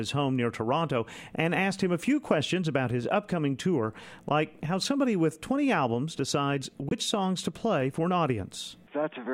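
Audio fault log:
6.89–6.92 s, Bluetooth dropout: likely a late packet never reached the headphones, so the output cuts to silence, then resumes as if playback had continued.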